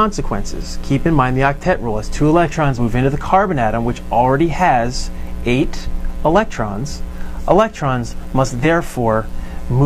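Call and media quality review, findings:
Compressed frames skipped at 2.74 s and 8.60 s: audio jumps ahead about 50 ms each time. Decoder dropped missing or corrupt frames. Waveform shows a discontinuity at each join.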